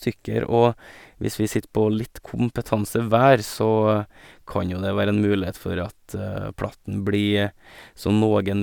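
No technical faults can be heard anywhere in the recording, so there is nothing to describe in time order.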